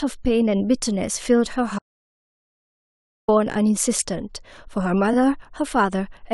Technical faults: audio dropout to silence; repeated frames

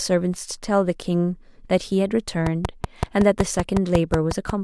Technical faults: train of clicks

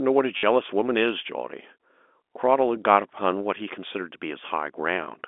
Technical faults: packet loss with last packet repeated

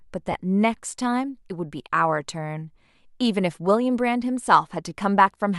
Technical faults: lost LE Audio frames

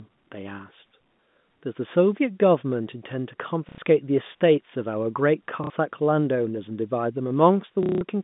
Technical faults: packet loss with last packet repeated

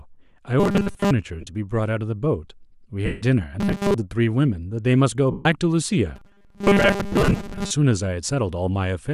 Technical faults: robotic sound from repeated short buffers; lost LE Audio frames

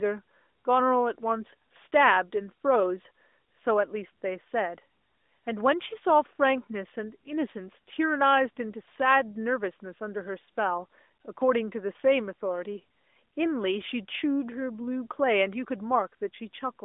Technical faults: none

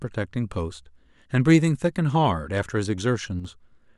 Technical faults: one channel drops out

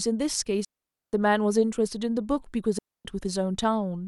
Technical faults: digital wireless dropout

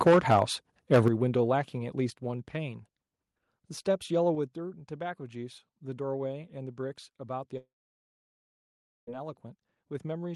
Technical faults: microphone overload; microphone volume stepped down; long network dropout

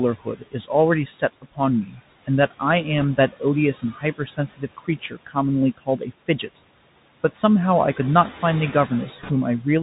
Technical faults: noise suppressor artifacts; Bluetooth CVSD headset codec; speech cut by the noise suppressor; bit errors on a Bluetooth voice link

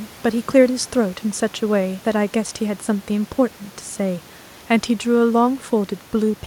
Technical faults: none

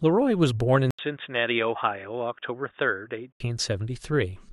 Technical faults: input switched to a poorer device

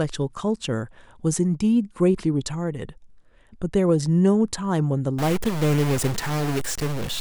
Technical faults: stuck bit

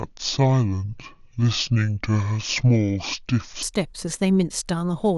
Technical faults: section at the wrong speed

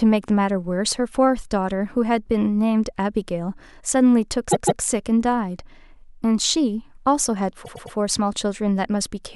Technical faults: repeated frames

